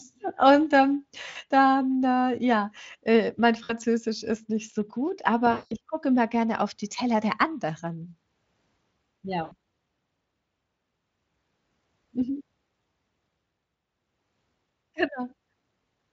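VoIP packet loss concealed by the speech codec breaks up the speech at 1.29 s (about 60 ms), 3.63 s (about 60 ms), 5.51 to 5.73 s (about 200 ms) and 9.43 s (about 80 ms). In each gap the decoder repeats its last pitch and filter at falling gain, so the sound smears into a buzzy or noisy fade. On a spectrogram the harmonics run flat and dim, and the waveform shows a decaying envelope, longest at 5.5 s.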